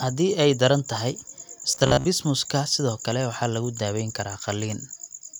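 From 1.72 to 2.06 s, right after "ay daran tahay", the speech turns into a rigid, metallic buzz near 67 Hz: robotic sound from repeated short buffers. About half the audio is likely replaced by repeats of a roughly 15 ms chunk while the real signal is skipped.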